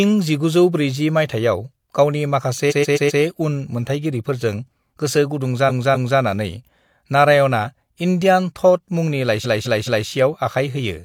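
Repeated frames occur three times in this speech. At 2.67 s, after "माइथायाव गावनि", a 128 ms block plays four extra times before "उन मोनथायगिरिफोरजों". At 5.65 s, a 256 ms block plays twice more. At 9.41 s, a 213 ms block plays three more times. Each is heard as a stutter. The same run of compressed frames reached the decoder more than once. Each repeat adds 0.51 to 0.64 s to the audio.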